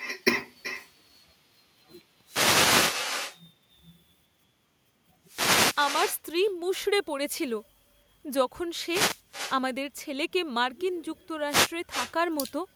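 From start to finish there's echo with no canceller running on this speech. The far end is evidently playing the call out of a loudspeaker, their mic catches it, and nothing strips it out, so every phrase comes back at you roughly 400 ms later after the round trip. The returned copy sits about 11 dB under the direct speech and sounds thinner, like a faint shadow trailing each line.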